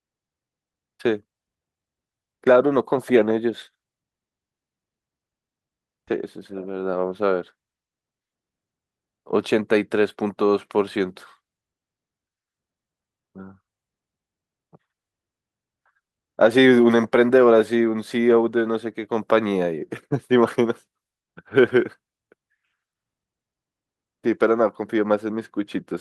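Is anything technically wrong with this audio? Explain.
No, no technical fault can be heard anywhere in this speech recording.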